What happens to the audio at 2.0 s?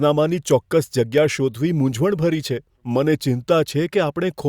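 Nothing goes wrong at 2.0 s: the speech carries on intact through that moment, with no dropout, click or other fault to be heard.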